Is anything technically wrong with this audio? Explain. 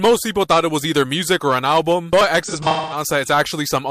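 Yes. From 2.43 to 3.02 s there is AAC frame loss with concealment. About 0.3 s of frames went missing across roughly 0.43 s, and the decoder patched them from the last good spectrum, giving a smeared, phasey stretch. A spectrogram shows blurred, frozen-looking bands there.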